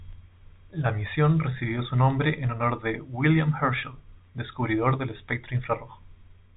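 The clip is speech heard through G.711 telephone coding, with nothing technically wrong with it.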